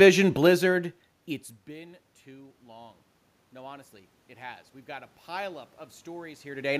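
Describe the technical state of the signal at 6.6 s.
At 6.6 s the automatic gain rising that began at 1.65 s is still under way, ending at 6.75 s. The input dropped about 17 dB when the talker moved around 1.5 s, and the gain control is now adding about 8 dB. Voice and room noise swell together, so the waveform envelope and the spectrogram's noise floor climb in one slow ramp.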